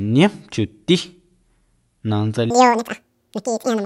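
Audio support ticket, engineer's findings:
Wrong sample rate, 2.50 s to end (3.85 s). Playback clock double the recording rate, no resampling; fits 24 kHz material sent out at 48 kHz. Speech runs at 2x speed, pitch up 12 semitones (one octave), high and hurried. Check rate negotiation at output stage.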